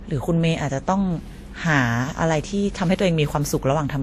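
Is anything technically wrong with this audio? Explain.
Yes. Throughout the speech, the sound is likely the result of transcoding between lossy codecs, with artefacts that fit a Vorbis encode near 49 kbit/s followed by WMA near 64 kbit/s. WMA spends bits re-coding the earlier smearing, so two kinds of swirly, watery texture overlap. A spectrogram shows nothing above 15.2 kHz and patchy high-band detail.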